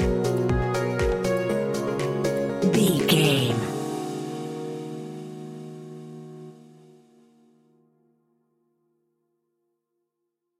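No technical faults can be heard anywhere in this audio. There is nothing here for a listener to flag.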